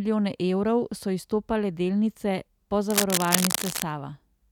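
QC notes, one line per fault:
2.90–3.82 s, cable scratch noise: just after "evrov so izstopale delnice", a dense, irregular rustling and scratching rides over the speech for nearly a second, roughly as loud as the speech itself. The bursts crowd together unevenly, the way rapid swings in contact resistance sound when a worn cable or connector is likely being moved. Unlike steady crackle or isolated clicks, the noise arrives as one clustered episode and stops once the movement ends.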